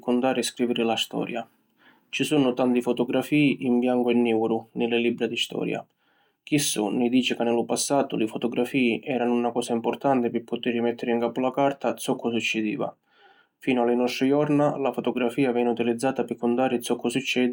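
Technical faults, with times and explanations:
Throughout, resampler restarted on every block: the converter, consistent with a 44.1 kHz to 48 kHz change, handled each 40 ms block alone without its neighbouring samples, leaving a small error at every edge, heard as a 25 Hz buzz during speech.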